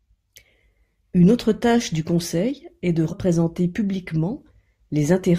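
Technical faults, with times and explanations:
3.11 s, damaged data in a compressed stream: right after "du conseil est de", the speech breaks briefly, lasting only about 18 ms. A stretch of the encoded stream arrived corrupted, so the decoder misread or discarded those frames, lost its sync with the frame structure and had to search for the next valid header before normal playback could resume.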